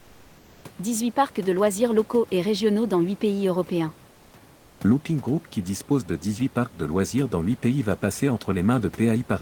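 At 4.11 to 4.33 s and again at 4.55 to 4.79 s, the room's background hiss briefly goes flat and featureless, and drops about 2 dB. This is comfort noise in place of the background, lasting 220 ms and then 240 ms. The likely cause is discontinuous transmission in an Opus-style codec: the sender pauses in those quiet gaps, and the receiver fills them with synthetic noise shaped like the real room noise, which otherwise sits about 27 dB below the speech.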